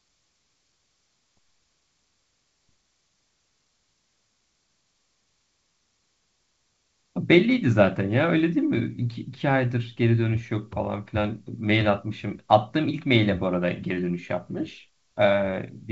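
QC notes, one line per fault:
No faults are heard in this speech clip. It carries G.722 wideband telephone coding at 64 kbit/s, whose trace on the sound is faint at most.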